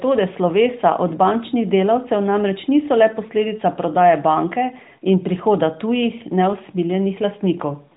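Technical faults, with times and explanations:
No technical faults are present; the speech stays within the narrowband limit of about 4 kHz, which fits the AMR narrowband mobile codec at its 12.2 kbps mode, with only light coding effects.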